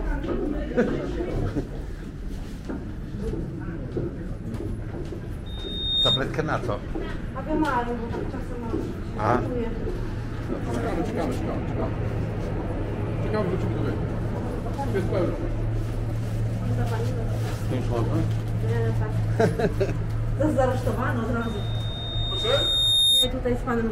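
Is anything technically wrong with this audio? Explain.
Yes: loudspeaker feedback squeal breaks out twice. From 5.46 to 6.21 s a piercing tone at 3.7 kHz swells over about half a second to roughly 5 dB above the audio, and from 21.41 to 23.33 s the same pitch climbs more slowly, over about a second and a half, to roughly 10 dB above it. The microphone is picking up its own loudspeaker, and at 3.7 kHz the loop gain tops one, so that frequency feeds on itself until the loop is broken.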